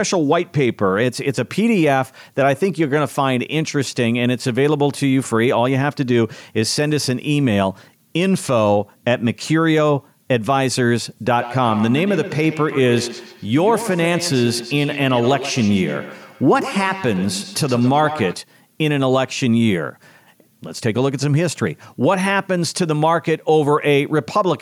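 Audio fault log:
11.39–18.43 s, feedback echo between two devices: the speech returns as a trailing repeat roughly every 150 ms, peaking at about 11 dB below the direct speech. A second device in the same room is playing back what this microphone sent, and this microphone picks that playback up again. The local echo canceller only removes audio from its own loudspeaker, so the acoustic loop between the two devices goes uncancelled and each word comes round again at that fixed delay.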